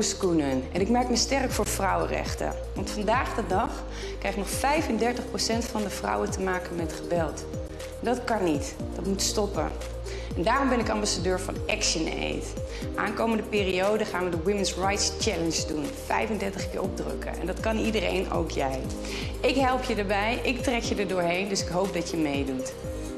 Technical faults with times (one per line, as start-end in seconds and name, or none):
1.64 gap at a join of encoded pieces
3.66 gap at a join of encoded pieces
5.67 gap at a join of encoded pieces
7.68 gap at a join of encoded pieces
9.69 gap at a join of encoded pieces
11.70 gap at a join of encoded pieces
13.72 gap at a join of encoded pieces
15.73 gap at a join of encoded pieces